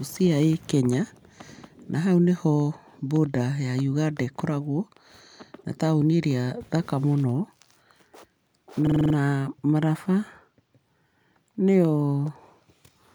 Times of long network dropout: none

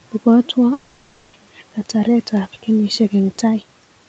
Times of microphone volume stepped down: none

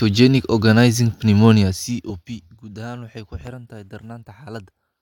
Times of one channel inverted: none

